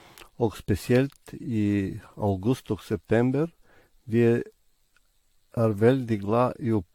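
Speech with generation loss throughout: the sound is swirly, hollow and smeared, with blurred consonant attacks and nothing above 19.3 kHz. That is more damage than one pass at a bitrate around 96 kbit/s would cause, so the likely cause is roughly ten successive AAC re-encodes.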